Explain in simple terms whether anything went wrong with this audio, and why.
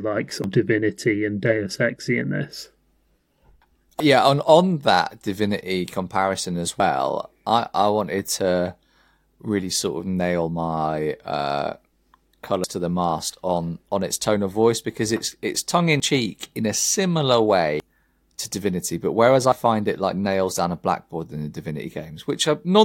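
At 0.44, 4.0, 16.0 and 17.8 s the speech skips ahead, losing up to about a tenth of a second, as between "because it's it's tongue" and "cheek in a". Unlike a dropout, no silent gap remains, which points to a likely dropped buffer (overrun).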